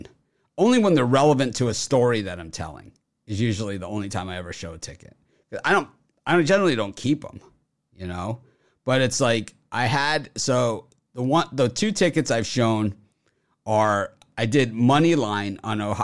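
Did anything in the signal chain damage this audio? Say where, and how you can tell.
No, no damage is audible.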